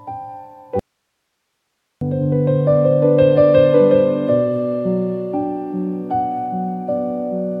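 At 0.79 s the sound drops out abruptly and does not return until 2.01 s, a gap of about 1.22 s. This is an audio dropout to a faint residue: the wanted signal is lost, but the chain after the break keeps passing its own noise, so the gap holds only hiss, roughly 55 dB below the normal level. The sharp cut at both edges sets it apart from a pause or fade, and the likely cause is an upstream interruption while the downstream path stayed live.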